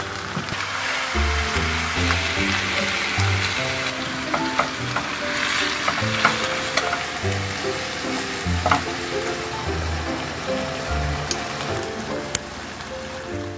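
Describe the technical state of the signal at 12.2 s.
At 12.2 s the signal is intact, with no dropout, distortion, glitch or other fault to be heard.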